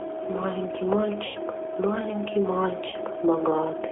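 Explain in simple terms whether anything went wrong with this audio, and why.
The whole recording has been squeezed through the G.729 codec, a phone-call format that rebuilds speech from a rough model of the voice. Everything below about 300 Hz and above 3.5 kHz is gone, so it sounds thin, slightly rough and a bit synthetic.

There are also two moments of VoIP packet loss concealed by the speech codec. Around 1.26 to 1.39 s, about 90 ms of audio went missing, and the decoder papered over the gap by stretching the last bit of voice into a fading buzz or noise. It happens again, shorter, at 2.89 to 2.96 s, where about 30 ms went missing. The sound stays weak or distorted just after each gap while the decoder recovers.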